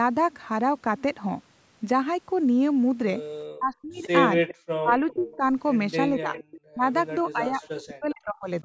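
From 3.58 to 4.03 s the speech drops by about 35 dB, the first instance of speech suppressed in double talk. It is likely an echo canceller that could not separate this talker from loudspeaker echo while both sides spoke, so it turned everything down. It recurs from 4.76 to 5.43 s and from 6.2 s to the end, with drops of about 40 dB. What sets it apart is that the talker's own sound thins and cuts out in pieces. Nothing is added.

An echo leak overlaps these stretches, at 3.94 to 4.55 s, 5.1 to 5.36 s, 6.34 to 6.61 s and 7.62 to 7.68 s. It is likely from a loudspeaker whose canceller let part of its microphone pickup return. A faint copy of the sound arrives about 0.4 s late, well below the main speech and faintest at 7.62 s. Unlike the suppression, this adds a delayed duplicate rather than removing sound. The lack of deep bass comes from the call's normal microphone filtering.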